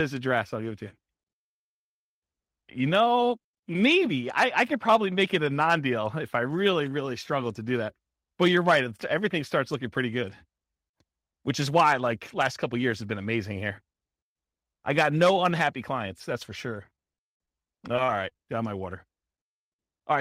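From 16.90 s to 18.36 s, the speech breaks into repeated packet loss, giving a robotic sound. About a dozen short holes appear, the longest 39 ms. Each is patched by stretching the previous sound. Roughly 13% of the stretch is concealed, so it sounds choppy.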